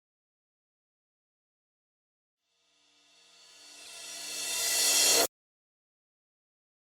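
A corrupt frame decoded at 3.85 to 3.88 s: damaged bits in a few compressed frames were played anyway, throwing energy into wrong frequencies as a brief blip peaking around -35 dBFS.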